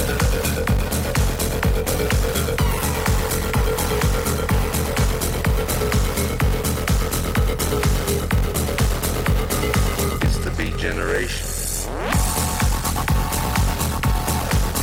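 Throughout, a 46.9 Hz buzz and playback slowed to 0.861 speed at unchanged timbre come from a block size mismatch (padded), with zero-filled gaps fitting 1024-sample read blocks.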